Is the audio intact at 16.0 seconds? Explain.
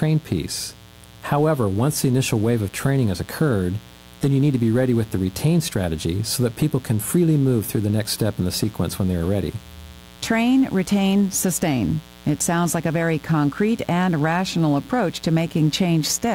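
No. A mains buzz runs through the whole clip, so 16.0 s is affected. Spikes from 60 Hz switching enter twice per cycle, spreading harmonics into the kilohertz range. A steady, raspy buzz sits roughly 25 dB below the speech.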